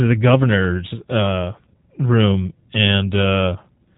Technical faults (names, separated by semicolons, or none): G.729 codec